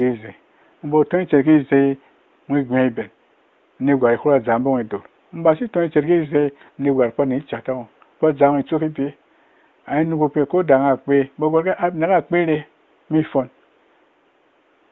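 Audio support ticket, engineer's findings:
No faults found: speech carried over the AMR wideband (HD Voice) path at 23.85 kbit/s, with at most faint coding traces and room noise sitting about 40 dB below the speech.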